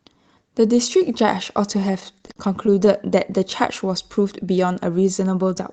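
Between 1.80 s and 2.88 s the speech shows repeated stalls (stutter): thirteen short gaps where packets arrived late and the jitter buffer ran dry, each filled by stretching the last sound until playback resumed. The longest hold is about 48 ms, and roughly 15% of that stretch, about 165 ms in total, is concealed rather than missing. The result is a dragging, hiccuping rhythm, heard through a call path whose top end stops at 8 kHz, consistent with Opus at around 32 kbps.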